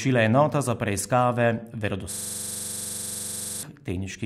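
From 2.13 s to 3.63 s the speech freezes into a system hang loop: the driver stalled while the hardware kept replaying one 42.67 ms slice, which fits a 2048-sample ring buffer. It repeats at 23.4 Hz, giving a rapid, rattling stutter.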